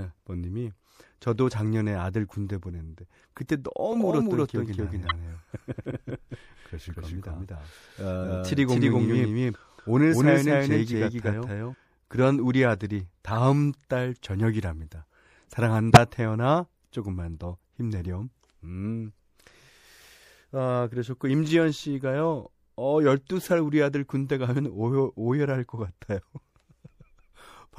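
The whole speech clip has a watery, swirling quality, with dulled treble and smeared consonant attacks. This is likely MP3 compression. The damage is plainly audible and fits a 64 kbps encode. Weak frequency lines flicker on and off between frames, and the top end is cut away.

From 3.92 to 11.74 s there is a doubled audio track. A second copy runs about a fifth of a second behind, at roughly equal level. It likely comes from a slower capture path. The echo has no room decay. It starts and stops abruptly.

Corrupt frames decoded appear at 5.07 to 5.12 s, 13.27 to 13.37 s and 15.91 to 15.97 s. Each spans a few damaged frames that were played anyway. Energy lands at the wrong frequencies. The result is short glitches, loudest at 15.9 s and quietest at 13.3 s.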